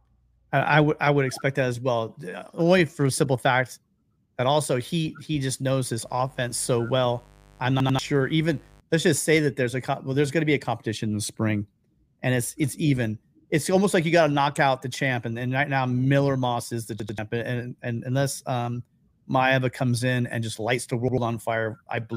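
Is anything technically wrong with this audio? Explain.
Yes, there are two kinds of fault.

From 6.05 to 8.81 s a steady, raspy buzz sits under the sound at about 30 dB below it. This is mains buzz: a dimmer, rectifier or poorly shielded line is injecting sharp switching spikes twice per cycle of the 50 Hz supply. Because the spikes are so abrupt, they carry a dense ladder of 50 Hz harmonics up into the kilohertz range, which gives the buzz its rasp instead of a smooth hum.

Three short stutters occur, each a hard-edged repeat of the same tiny fragment. The first runs from 7.80 to 7.99 s, inside the buzz, and the second from 17.00 to 17.18 s. Each plays a 92.88 ms slice two extra times and drops around a fifth of a second of new audio. The third, from 21.08 to 21.18 s, repeats the slice once and loses about a tenth of a second. This is a repeated buffer: fresh audio arrived late, so the device replayed its last block, which fits a 4096-sample buffer.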